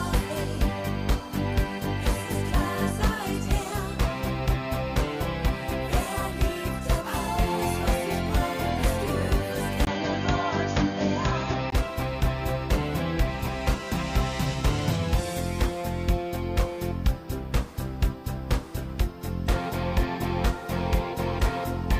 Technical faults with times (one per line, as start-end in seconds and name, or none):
9.85-11.72 input switched to a poorer device